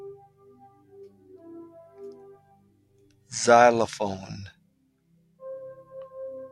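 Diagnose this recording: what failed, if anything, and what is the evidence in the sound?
A speech-tuned noise suppressor in call processing was left on for non-speech sound, swinging gain by around 20 dB, so sustained parts pump and thin.

Sound cut by the noise suppressor shows at 0.23–1.3 s, 2.36–3.31 s and 4.54–5.41 s. Steady content, mistaken for noise, sinks by about 12, 11 and 12 dB.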